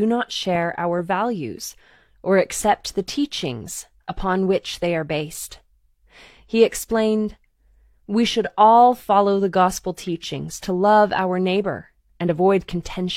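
Nothing in this speech recording stood out as a technical problem on listening.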